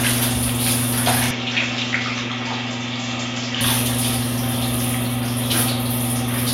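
At 1.31 s the sound turns duller and boxy. Nothing above about 7.6 kHz comes through, so the top end is gone. The level drops by roughly 5 dB, and a faint new background noise appears, far below the sound itself. There is no gap at the change. At 3.61 s the full brightness and level return. The likely cause is an input switched to a poorer device, whose narrower band, own noise and lower gain briefly replaced the original input.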